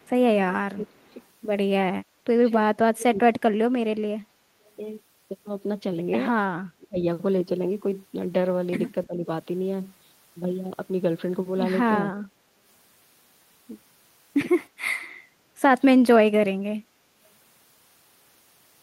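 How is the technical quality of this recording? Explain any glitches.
The recording has two kinds of call-processing glitches, both confined to the first ten seconds.

Echo leak: at 0.00–0.09 s, 0.95–1.14 s and 4.65–4.70 s, a faint delayed copy of the voice slips through, likely because the far end's echo canceller, working against a loudspeaker, failed to remove everything its microphone captured and sent the remainder back. The copy trails by 317 ms and sits far below the main voice, so it registers as brief, ghostly fragments rather than a clear repeat.

Speech suppressed in double talk: at 0.74–1.20 s, 2.00–3.99 s, 6.75–6.98 s and 9.06–9.27 s, the voice sinks, likely because both sides spoke at once and the echo canceller, unable to tell its own talker from loudspeaker echo, turned everything down. The drops range from a mild dip of around 10 dB to a near cut-out of roughly 30 dB in the 2.00–3.99 s stretch, heard as the voice fading or breaking into pieces.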